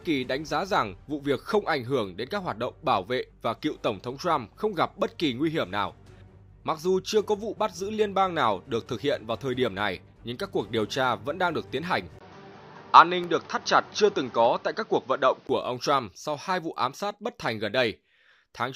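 At 12.19 s the sound drops out for about 20 ms, then returns dull and boxy, with nothing above 6.4 kHz, a level shift of roughly 5 dB and a new noise floor some 35 dB down, until it clears at 15.49 s. The likely cause is an input switched to a poorer device, a narrower-band microphone or headset profile.

At 13.24 s, inside that stretch, a sharp tick is heard. It is a block of digital silence lasting only 0.35 ms, where samples were replaced by zeros, probably from an output buffer not filled in time, with abrupt edges producing the click.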